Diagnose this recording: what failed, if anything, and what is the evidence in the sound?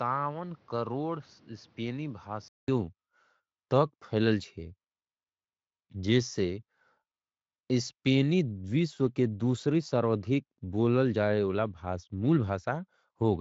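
From 0 to 2.68 s the speech is duller and quieter, with nothing above 6.6 kHz and added noise. A 200 ms gap follows. Likely an input switched to a poorer device.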